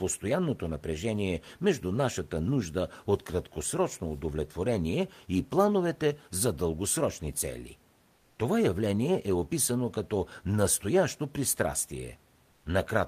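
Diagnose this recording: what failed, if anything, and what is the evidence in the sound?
Right after "плановете за дългосрочни цели", from 8.17 to 8.35 s, the real room noise gives way to a flat, featureless hiss about 2 dB quieter. That's comfort noise in place of the background, likely codec DTX muting the pause and the receiver synthesising filler.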